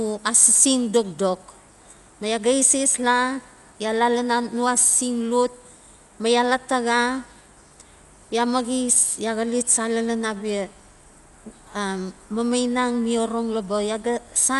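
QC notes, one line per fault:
Throughout: Dolby Digital compression, likely. Nothing above 11.5 kHz, so the speech sounds dull, and a rough, fluttering noise sits around its tones, which fits a low bitrate near 64 kbps leaving many frequency lines without bits and filled with dither noise.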